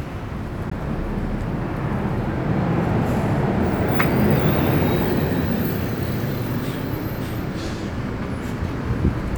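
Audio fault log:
0.70 s, Bluetooth dropout: A wireless link likely failed to deliver audio data to the headphones in time, and the late data was discarded rather than played. The result is a brief hole of about 14.5 ms where the output goes silent, with abrupt edges or a fade of a few milliseconds. The sound then picks up further along, as if it had kept running underneath, which fits a single lost packet.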